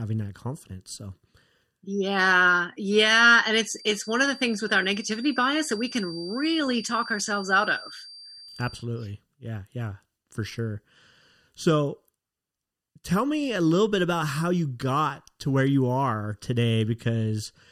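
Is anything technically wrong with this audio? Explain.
Yes. A feedback whistle runs from 3.54 to 8.88 s, between "yeah yeah and" and "yeah yeah for sure": a faint 4.7 kHz tone that swells and fades slowly, likely a speaker-to-microphone loop held just short of runaway, so it never swells into a howl.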